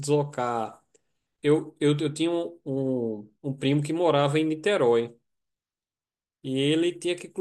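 Nothing stood out as a technical fault on listening to this speech recording.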